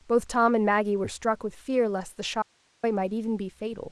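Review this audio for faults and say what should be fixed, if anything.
An audio dropout to a faint residue runs from 2.42 to 2.83 s: the speech cuts abruptly to hiss around 40 dB down, likely a signal path briefly losing its source while staying live. On a waveform it shows as a sudden flat, near-silent stretch; on a spectrogram, a sharp-edged band of faint broadband noise. Secure connections and monitor input continuity during recording to prevent it.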